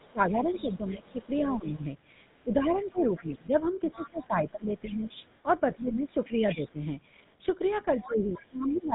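Throughout, the sound carries the GSM full-rate codec's gravelly buzz. The voice is rebuilt from a coarse pulse excitation, so its texture turns rough. Nothing passes above 3.8 kHz, which fits the 13 kbps full-rate coder.

From 0.02 to 6.7 s, the other side's voice leaks through, faint, about 20 dB under the talker. The likely cause is an echo canceller that failed to remove the loudspeaker from the microphone. From 0.13 to 6.82 s, speech is suppressed in double talk. The talker dips by up to about 15 dB, for roughly 3 s in total. Most likely the canceller turned everything down while both sides spoke.

The leakage returns from 8.0 to 8.82 s, louder, about 15 dB below the talker, again likely from residual loudspeaker echo. From 8.05 s to the end, suppression recurs. It cuts the voice by up to about 15 dB for roughly 0.7 s, likely from double talk again.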